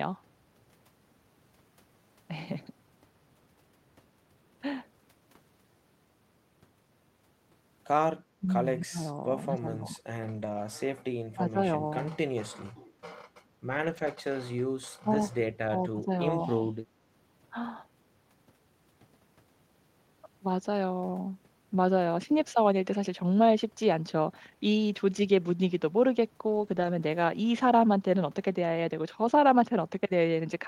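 Between 8.4 and 10.02 s the speech appears to be caught in double talk: an echo canceller, likely unable to separate the near talker from loudspeaker echo while the far side also spoke, turned the signal down. This speech suppressed in double talk makes the speech dip by up to about 20 dB, in pieces totalling around a second.

At 10.33 to 10.55 s a lost packet was rebuilt from error correction. The decoder filled the loss from low-bitrate copies carried in later packets, so there is no gap, but about 120 ms sounds rougher and noisier. The spread fits several lost packets.

The suppression returns at 11.31 to 11.58 s, with a drop of about 25 dB, and briefly at 11.90 to 11.95 s, where it is a slight dip of about 5 dB.

Rebuilt audio appears again at 13.69 to 14.11 s, this time about 220 ms of coarser, grainier sound.

From 15.03 to 16.11 s the speech is pushed down again by up to about 25 dB, in pieces totalling roughly half a second. 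Inside that stretch, at 15.13 to 15.15 s, a single 20 ms rebuilt frame adds a brief rough patch. A final dip of about 25 dB follows at 16.46 to 16.78 s.

The last rebuilt stretch runs from 26.47 to 26.89 s, about 220 ms of noisier, less clean audio.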